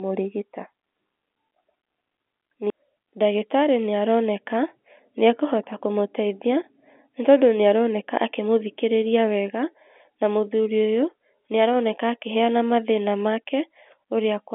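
Speech carried over G.711 telephone coding, heard as the expected 250 Hz to 3.5 kHz line band, with no technical fault present.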